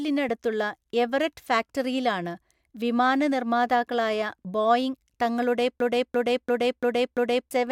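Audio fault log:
5.80–7.51 s, system hang loop: just after "വിമാന നിർമ്മാതാക്കളായ ബോയിംഗ് തങ്ങളുടെ", one 341 ms slice of the speech repeats exactly five times at about 2.9 Hz, giving a coarse machine-gun stutter rather than a buzz. The host or driver stopped supplying new data while the audio hardware kept replaying the same ring buffer, and the loop length fits a 16384-sample buffer. About one and a half seconds of the real audio never reached the output.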